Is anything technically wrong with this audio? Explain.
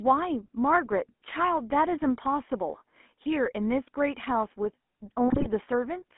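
Yes, two problems. The whole clip has gone through the GSM full-rate codec, which fits a 13 kbit/s phone channel. It rebuilds speech from a vocal-tract model driven by sparse regular pulses, so the voice comes out buzzy and gravelly, and everything is squeezed into roughly 200 Hz to 3.4 kHz.

Then there's a burst of GSM bit errors from about 5.28 to 5.47 s. Corrupted bits reached the decoder and scrambled its filter, pitch and gain values for several frames, so the speech briefly breaks into squawky, gargling pops.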